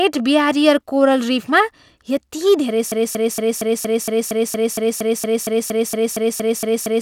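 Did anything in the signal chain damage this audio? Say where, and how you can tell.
Yes. From 2.92 s to the end, the speech locks into a broken-record loop, a fragment of about 0.23 s repeating exactly, back to back. That points to a stall, most likely in the buffer or playback stage, replaying its last held fragment. Whatever should have played after 2.92 s is gone.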